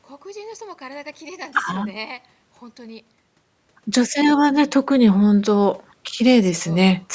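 The speech shows no technical faults; it carries the ordinary mark of call microphone processing, with the lowest bass trimmed and no content above 8 kHz.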